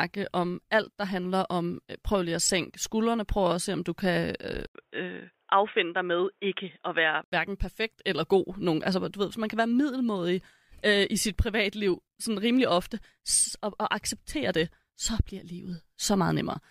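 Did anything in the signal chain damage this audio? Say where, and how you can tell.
Yes: an input switched to a poorer device, likely, at the driver/device stage, from 4.67 to 7.32 s. After an 80 ms silence the speech loses everything above 3.8 kHz and picks up a new, faint noise floor at an unchanged level, then clears again.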